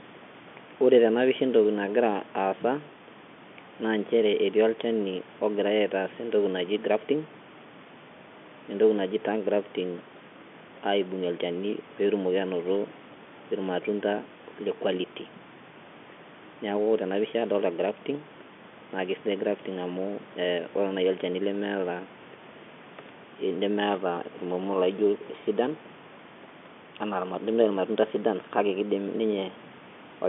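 No faults: the speech carries the expected 150 Hz to 3.5 kHz telephone band of G.711 coding, with room noise sitting about 20 dB below it, as normal for this line.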